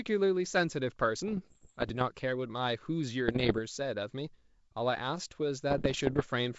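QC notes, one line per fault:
1.25–2.03 s, 3.28–3.60 s, 5.70–6.26 s: bit errors on an ADPCM link. Flipped bits disturb the decoder's step size and predictor, causing pops, rough bursts and brief level jumps; the later two runs sound denser.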